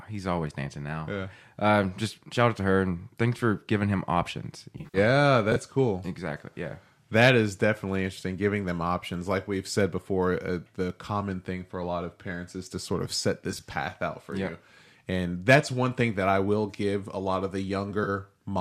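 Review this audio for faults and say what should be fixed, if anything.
AAC frame loss with concealment occurs three times. From 4.78 to 4.98 s, after "for giving him options", about 130 ms goes missing over 160 ms, with the longest gap near 70 ms. From 13.52 to 13.62 s, between "to sort of set" and "out for yeah you", 60 ms is lost. From 18.04 to 18.09 s, after "give a lot of", 30 ms is lost. Each time the decoder rebuilds the gaps from the last good spectrum. That leaves smeared, noisy patches. Adding forward error correction or a larger jitter buffer on the low-delay AAC stream, likely AAC-ELD, would prevent this.

Chunks out of order occurs from 5.52 to 5.56 s. A 20 ms chunk plays one chunk late, after the audio that should follow it. No audio is lost. But the three hard joins cause a brief jumbled moment. Reordering packets by sequence number before playback would prevent this.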